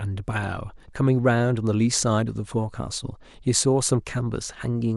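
Throughout the speech the sound is dull and carries a gurgling, granular roughness as upper bands drop in and out, likely MP2 compression at a rate around 80 kbps. Unlike a simple low-pass filter, the top end flickers rather than staying cleanly cut.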